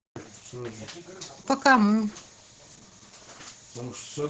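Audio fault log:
Throughout: Opus voice compression. Speech sounds muffled, hoarse and slightly robotic. Nothing above 8 kHz remains, and the coarse excitation points to SILK near 10 kbps.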